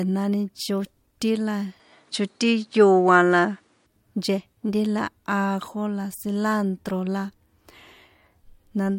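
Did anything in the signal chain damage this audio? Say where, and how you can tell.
Yes. The input appears to have switched to a poorer device from 1.80 to 3.86 s, after "chotín la" and before "nchejnti la". The speech loses everything above 10.5 kHz, shifts level by around 5 dB, and gains a faint new noise floor, with no gap at the switch. This is likely a driver-level input change.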